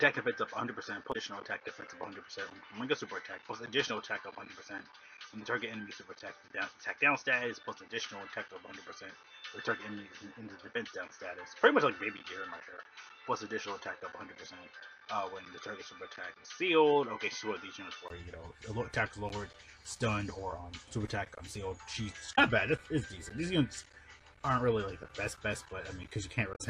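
The input was likely switched to a poorer device: until 18.10 s the audio is dull, with nothing above 6.3 kHz and faint noise well below it, then clears after a 20 ms gap. Damaged data in the compressed stream makes the decoder lose sync at 1.09–1.16 s, 22.31–22.39 s and 26.52–26.61 s, each heard as a brief glitch.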